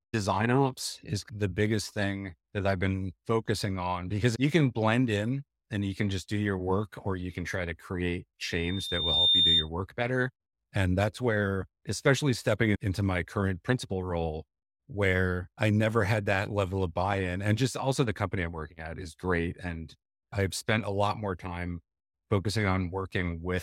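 From 8.50 to 9.69 s a loudspeaker feedback squeal rises at 3.6 kHz, swelling over most of a second to about 5 dB above the speech as the microphone-to-speaker loop exceeds unity gain. A spectrogram shows one bright, thickening horizontal line; the waveform envelope balloons.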